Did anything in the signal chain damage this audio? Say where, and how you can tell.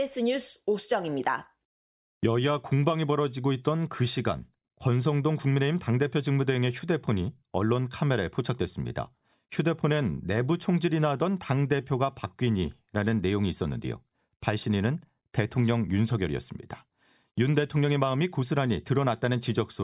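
No, the speech signal shows no sign of damage from any stage of the chain.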